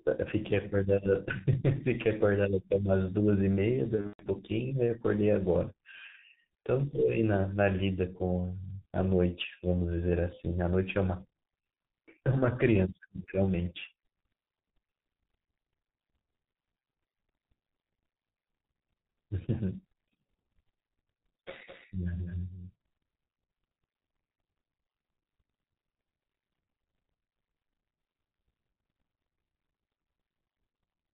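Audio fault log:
Throughout: G.723.1 codec. The speech is muffled and hoarse, with nothing above 4 kHz and consonants smeared together, which fits G.723.1 running at about 6.3 kbit/s with heavy damage. The codec encodes 30 ms frames and updates its model of the voice slowly, so fast changes blur. A spectrogram shows a hard ceiling at 4 kHz, coarse and smudged formant bands, and blocky texture repeating at 30 ms steps.
3.95 to 4.26 s: VoIP packet loss concealed by the speech codec. Across this 0.31 s stretch, about 180 ms of audio went missing in scattered gaps, the longest about 120 ms. During each gap the decoder repeated its last pitch and filter while lowering the gain, so the voice is stretched into a fading buzzy tone or coloured noise. Because each frame builds on the previous one, it stays weak and distorted for a moment after the gaps. On a spectrogram, flat, smeared stretches replace the normal moving formants, and the waveform envelope sags in steps.
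21.67 s to end: doubled audio track. From here on a second, full-band copy of the speech runs about 5 dB below the original and roughly a fifth of a second behind it. It is likely caused by a second, slower capture path or two misaligned copies in an edit. Every syllable has a distinct, uncoloured repeat with no room decay, and the copy starts abruptly. A spectrogram shows each speech pattern duplicated at a fixed offset, and the waveform shows a smaller twin of each burst.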